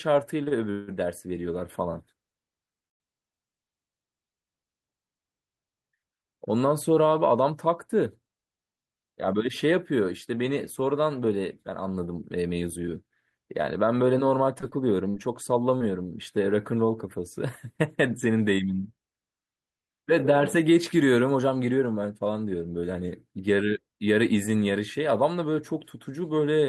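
Repeated stalls (stutter) open this speech recording between 0.43 and 0.90 s. The jitter buffer runs dry three times, the longest wait lasting 168 ms, and the receiver stretches the last sound across each hole. Nearly half of that stretch is filled-in sound, so the speech drags and stutters, yet nothing is actually lost because playback picks up where it stopped each time. A call audio freeze follows at 2.88 to 3.02 s. The sound hangs for 122 ms and is almost entirely silent for about 120 ms before continuing intact, which makes the rest of the call run 122 ms later than before. The likely cause is a burst of packets held up in transit that left the buffer empty until they arrived. Jitter buffer speed-up appears twice, from 8.73 to 9.92 s at 108% speed and from 12.39 to 13.12 s at 113%. Having built up surplus delay, the receiver trims tiny pitch-period slices in quick succession, removing about a tenth of a second each time. 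The talker sounds briefly hurried while the pitch stays unchanged. Repeated packet loss (robotic sound) hits from 14.61 to 15.82 s. Four separate holes, none longer than 40 ms, are patched by repeating the preceding sound, and 100 ms of real audio is gone. Because the patches come close together, the speech turns choppy across that second or so.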